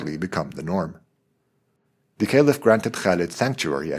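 Nothing in this short bit of speech trips any alarms, with no dropouts, glitches or distortion turning up anywhere along the way.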